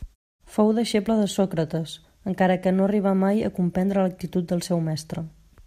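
No technical faults can be heard in this speech clip. In the pauses the background fades down to silence and returns in time for the next sound, so no speech is lost.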